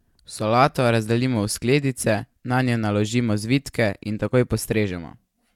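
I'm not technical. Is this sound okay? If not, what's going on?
Yes, it's fine: nothing in this recording sounds broken or glitchy, so there's nothing to worry about here.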